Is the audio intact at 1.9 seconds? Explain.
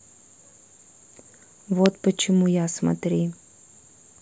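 No. At 1.86 s an electrical switching spike cuts into the speech. It lasts about a millisecond. It is heard as a sharp, loud snap sitting on top of the speech, peaking not far below full scale. The likely cause is a nearby switch, motor or static discharge arcing briefly. The audio line picks up that burst of interference. The result is a click added to the signal, not a gap in it.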